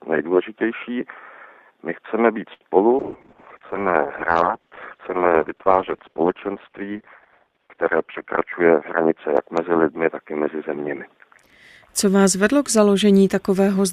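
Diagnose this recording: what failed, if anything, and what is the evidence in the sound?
At 2.53 s the sound briefly hangs: the last bit is held and stretched for about 74 ms, with a faint buzzy, slightly dipped quality, then continues from exactly where it stopped, with nothing skipped. This is a short stall from a late packet, at the network and jitter-buffer stage. A packet arrived too late, the buffer ran dry, and the receiver filled the gap by extending what it already had until the packet came in.

From 2.99 s to 11.27 s the audio turns muffled and rough, with a watery, coarse texture. The top end is cut off at about 6 kHz, down from a full 20 kHz, and it is at its worst for roughly 5 s. This is a call bitrate drop in the call processing and codec stage. The bandwidth estimate fell, and the encoder was pushed from around 96 kbps down to about 8 kbps, which fits the band-limiting and the coarse coding heard here.

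Between 8.60 s and 9.11 s, inside that degraded stretch, the sound briefly rushes forward at about 112% speed, though its pitch stays the same. This is a jitter buffer speed-up, again at the buffer stage. Audio had piled up beyond the buffer's target, so the receiver trimmed out many tiny pitch-period-sized slices in quick succession, roughly 70 ms in total, to pull the delay back down.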